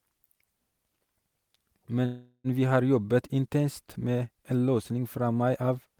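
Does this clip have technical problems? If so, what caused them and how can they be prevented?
Yes. A call audio freeze runs from 2.05 to 2.47 s, just before "vi har jobbet intenst". It was likely caused by delayed packets draining the jitter buffer. The last sound stretches into a fading buzz, then about 60 ms of silence. On a spectrogram this shows as smeared flat bands tapering into a blank gap. Speech then resumes intact, about 0.39 s late. A larger adaptive jitter buffer on a more stable network path would absorb such delays.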